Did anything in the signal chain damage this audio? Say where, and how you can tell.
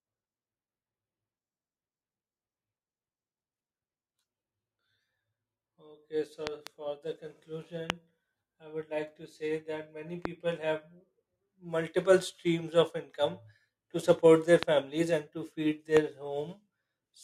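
Yes. A loud pop recurs through the analogue stage, likely from intermittent voltage steps such as a loose plug, a switch or static, each pulse summed onto the speech and shaped by the circuits after it. A double pop spans 6.47 to 6.69 s, just before "for the", with single sharp pops at 7.90, 10.25 and 14.63 s (just before "and to feed") and at 15.97 s, right after "and to feed". They peak at roughly 15 to 20 dB above the speech, which continues underneath each one.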